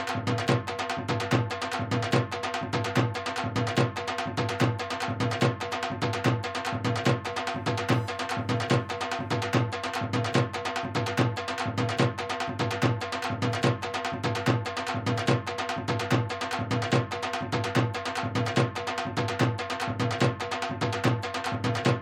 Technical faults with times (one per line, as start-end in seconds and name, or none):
7.24-9.58 computer activity noise